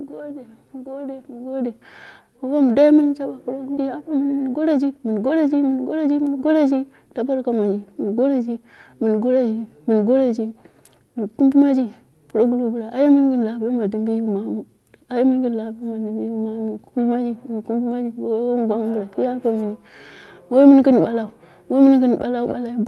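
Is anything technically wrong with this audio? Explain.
Yes, there are two related faults here, right next to each other.

At 3.77 to 3.79 s there's a skip ahead: roughly a second of audio just isn't there, and playback jumps straight to later material with no gap and nothing filled in. That happens when a chunk gets dropped, either in transit or because the jitter buffer overflowed and threw it away, while newer audio was already queued. The two sides of the cut butt together almost seamlessly, so you hear an abrupt lurch rather than silence.

Right after, from 3.87 to 6.08 s, there's a jitter buffer speed-up. The buffer was still holding more audio than it wants, so the receiver kept snipping out tiny pieces a pitch period or so long, over and over, to claw back the delay. That shaves off something like a third of a second, and the speech runs at about 111% speed while keeping its normal pitch, so it just sounds a bit rushed for those couple of seconds.

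The top end stops around 12 kHz, which fits an Opus call at a moderate bitrate.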